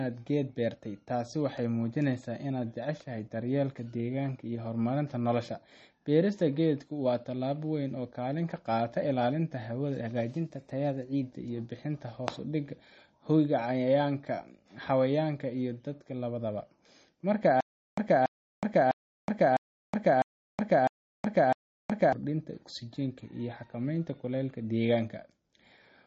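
Speech, with plainly audible watery MP3 compression throughout, likely from a low bitrate around 32 kbps; a spectrogram shows nothing above 8.4 kHz and flickering high-frequency patches. From 10.31 to 11.22 s, just before "iyo bixinta", a drift correction step speeds the audio up 5.4% and raises pitch about 91 cents, likely a clock-matching rate jump visible as upward-shifted harmonics. From 17.61 to 22.13 s, a stutter with silent gaps, likely a stalling stream, repeats a 284 ms burst seven times, each followed by 370 ms of silence, showing as evenly spaced blocks on the waveform.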